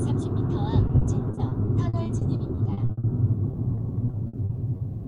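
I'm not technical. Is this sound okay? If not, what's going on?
No. From 0.87 to 3.05 s and again from 3.51 to 4.81 s there is repeated packet loss (robotic sound): many brief holes, none longer than 60 ms, each filled by stretching the previous sound, so it turns choppy and robotic rather than dropping to silence.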